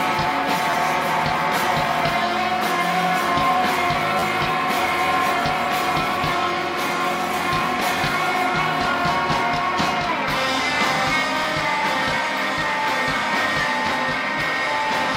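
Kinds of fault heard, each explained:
Repeated buffer: New audio failed to reach the output in time, so the device played its last block again. Each repeat unit is about 11.6 ms long, which fits a 512-sample buffer. It is heard as a brief buzz or click-like stutter with hard joins. At 0.71–0.73 s the block plays twice extra, at 4.19–4.23 s three times, and at 11.44 s once, each time dropping a short stretch of the following sound.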